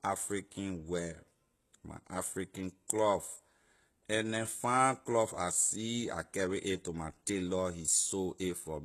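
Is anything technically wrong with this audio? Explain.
Yes. Throughout the speech, sibilants sound gritty and metallic, likely from HE-AAC compression at a very low bitrate near 16 kbps. Its replicated treble misaligns harmonics, and spectrograms show copied bands stopping at 12.3 kHz.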